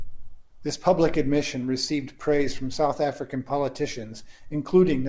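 Nothing stood out on listening to this speech clip, which came through an ordinary call path whose band-limited sound, with nothing above 8 kHz, fits a wideband call codec.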